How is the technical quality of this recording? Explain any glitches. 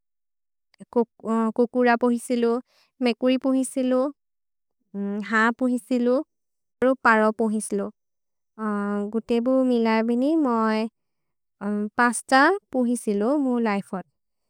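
No glitches or technical faults are audible anywhere in the recording.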